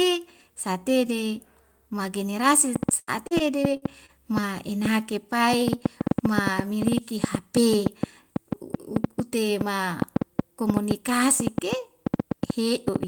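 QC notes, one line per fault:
2.76 to 13.08 s, train of clicks: irregular ticking and popping about 15 dB above the speech, roughly 5.6 clicks per second, continuing through pauses to the end. Same-shaped pulses at an uneven pace most likely come from nearby equipment interference or a faulty connection or power supply.
2.99 to 4.46 s, repeated packet loss (robotic sound): choppy speech with pieces missing. Six successive gaps, the longest 79 ms, were patched by extending the preceding sound, covering 224 ms in all, about 15% of this stretch, so the concealment itself is audible.
6.39 to 6.94 s, jitter buffer speed-up: speech sounds briefly hurried at 107% speed while pitch stays unchanged. An overfilled receive buffer was trimmed by cutting out short pitch-period slices repeatedly, removing around 40 ms to bring latency back down.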